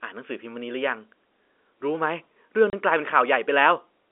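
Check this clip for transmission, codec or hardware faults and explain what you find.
One transmission fault is audible: packet loss filled with silence. From 2.70 to 2.73 s the speech drops out completely for 30 ms, a gap that fits a single lost packet. The receiver had nothing to decode for that interval and substituted silence instead of concealing the loss, so the signal stops and restarts abruptly. Those hard edges leave a clean hole in the speech. The G.711 telephone coding underneath is audible as a band-limited line, roughly 300 Hz to 3.5 kHz.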